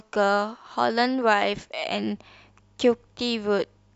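A speech clip with mains hum from 1.87 s to the end: a steady 50 Hz tone about 35 dB below the signal, pointing to a ground loop or nearby transformer.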